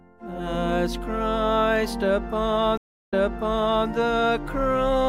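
At 2.77 s a stream reconnect leaves 0.35 s of silence, then a fresh decoder repeats audio from 0.74 s earlier, unlike a dropout.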